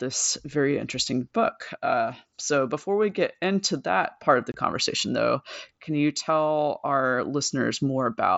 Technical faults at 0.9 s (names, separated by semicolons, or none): none